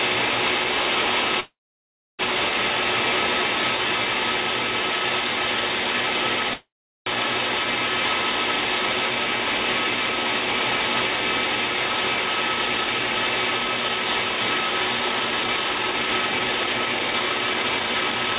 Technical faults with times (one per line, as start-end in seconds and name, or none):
1.40-2.21 call audio freeze
6.54-7.08 call audio freeze
12.24-18.36 jitter buffer speed-up